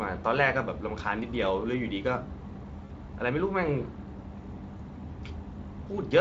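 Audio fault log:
2.85–2.92 s and 4.77–4.81 s: VoIP packet loss concealed by the speech codec. About 40 ms, then 20 ms, of the Speex stream goes missing, which fits two lost frames and then one. The decoder fills each gap by extending its last pitch and spectral shape at falling gain, so the speech smears into a brief buzzy tone or coloured noise that fades. Because each frame depends on the one before, the sound stays weak past each gap.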